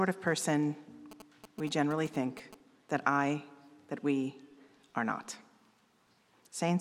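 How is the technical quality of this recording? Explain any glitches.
The recording has one fault. From 1.11 to 2.55 s, GSM signalling bursts intrude: a nearby 2G phone's radio pulses, rectified by the audio circuitry, give a galloping ticking buzz at about 217 Hz, roughly 15 dB below the signal. A spectrogram shows vertical stripes in galloping groups, and the waveform shows spiky clusters.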